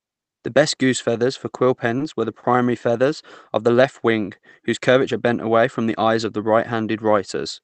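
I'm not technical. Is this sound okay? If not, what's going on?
No. At 1.98 to 2.01 s and 2.40 to 2.44 s the voice briefly hangs on one sound. Each is a short stall from a late packet: the call held the last sound until the delayed piece arrived.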